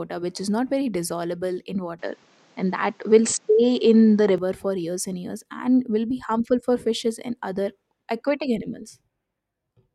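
After "not very dissolvable in", from 1.99 to 4.38 s, the speech turns duller, with nothing above 8.2 kHz, a level shift of about 5 dB and a faint new noise floor, with no gap. The likely cause is an input switched to a poorer device. The changes in level and noise set it apart from a plain filter, and it clears before "for years and years".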